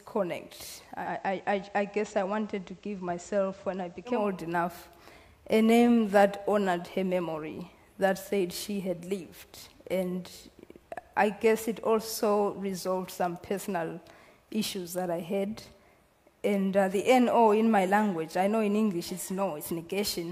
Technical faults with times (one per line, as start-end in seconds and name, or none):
0.89-4.30 digital radio blending to analogue